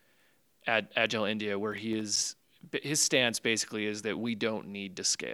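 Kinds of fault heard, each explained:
Processor overload crackle: The processor falls behind and misses its deadlines for filling small audio buffers, so some buffers go out empty. In this speech clip it happens from about 1.72 to 2.48 seconds. Each missed buffer leaves a short hole of silence with hard edges. The holes are a few milliseconds long, which fits buffers of roughly 3 ms. About ten misses land close together. They merge into a gritty, tearing crackle over the speech, and the crackle stops when the load eases.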